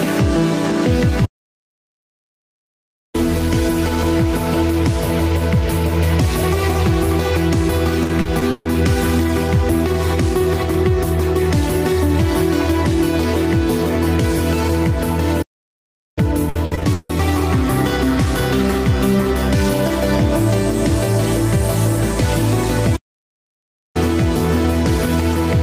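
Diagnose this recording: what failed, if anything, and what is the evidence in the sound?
The sound drops to silence at 1.25–3.15 s, 15.42–16.18 s and 22.96–23.97 s. These are playback stalls, likely from the player's buffer running empty or its thread blocking.

Choppy, patched sound at 8.03–8.67 s (five gaps) and 16.49–17.11 s (six gaps) points to repeated packet loss on the network. Lost stretches were filled by extending prior sound.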